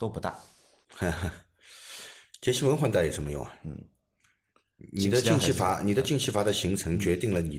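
There are no technical faults to describe in time order in this speech.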